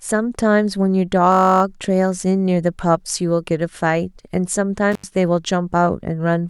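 A speech recording with two technical faults. From 1.32 to 1.62 s a system hang loop occurs: the playback path stalls while the sound hardware keeps replaying the same 21.33 ms slice of its ring buffer, 14 times in a row. The repeats arrive at 46.9 Hz and are heard as a steady buzz. The loop length fits a 1024-sample buffer, and the speech resumes with essentially nothing skipped. On a spectrogram this shows as a block of identical vertical stripes at an even 21 ms spacing, with harmonics of 46.9 Hz. On the waveform the same small shape is tiled repeatedly. At 4.92 s an intermittent contact fault opens the line for 84 ms, ending at 5.04 s, as a loose cable or plug momentarily disconnects. The sound drops out abruptly, with a crackle at each edge. The waveform falls almost flat between two sharp spikes, and the spectrogram shows a dark gap bracketed by thin broadband clicks.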